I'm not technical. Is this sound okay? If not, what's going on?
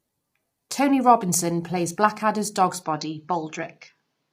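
No. All the way through, the speech sounds heavily rough and grainy, with a noisy, artificial edge. That points to low-delay AAC compression, the kind used in video calls, squeezing the sound hard to save data.

From 2.83 s to the end, the speech suddenly turns duller, with everything above about 6.6 kHz gone, yet there's no gap and the loudness stays about the same. The likely cause is the input switched to a poorer device, such as another microphone.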